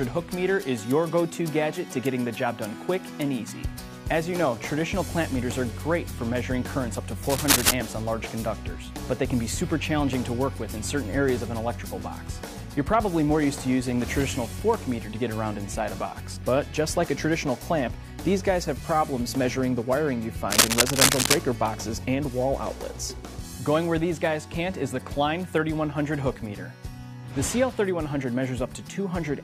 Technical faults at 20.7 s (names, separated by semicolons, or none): cable scratch noise